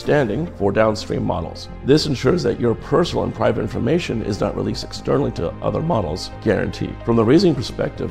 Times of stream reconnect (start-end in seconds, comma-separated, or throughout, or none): none